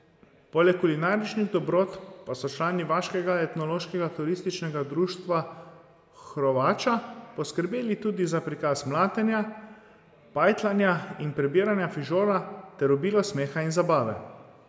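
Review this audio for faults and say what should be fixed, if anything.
No faults turned up in this audio, so nothing needs to be fixed.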